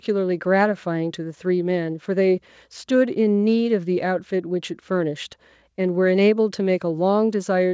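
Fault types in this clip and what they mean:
No faults can be heard in this speech.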